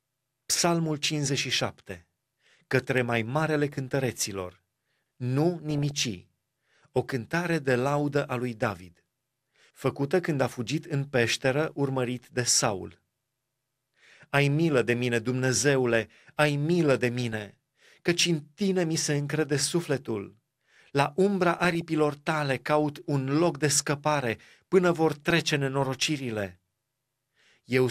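Speech with DAB burbling at 5.71–5.91 s (after "mai marele cântăreților nu"), 11.62–11.79 s (after "când a fugit în"), 17.19–17.33 s, 21.51–21.81 s (before "tale caut un loc") and 25.12–25.30 s: bit errors corrupt MP2 sub-bands, producing short blips of noise.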